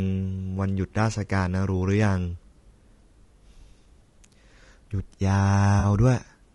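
Throughout, the speech has likely passed through low-delay AAC compression at a low bitrate, which fits about 32 kbps. Its short frames resolve pitch harmonics poorly, so the voice is plainly rough and grainy, with noise filling the gaps between harmonics and a thin, synthetic-sounding top band.

From 5.79 to 5.85 s, AAC frame loss with concealment occurs: about 40 ms of coded audio went missing, which fits two lost frames, and the decoder patched the gap from the last good spectrum. The result is a brief smeared, noisy, phasey blur.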